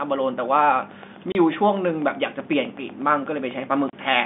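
From 0.91 s to 4.15 s, a steady ticking of around thirty clicks runs at about 8.1 per second, roughly as loud as the speech itself. This train of clicks likely comes from interference from nearby equipment or a faulty connection or power supply. At 1.32 s and again at 3.90 s, the speech drops into a 30 ms hole of dead silence. That is packet loss filled with silence, and each gap fits a single lost packet. The G.711 telephone coding limits the band to about 150 Hz to 3.6 kHz.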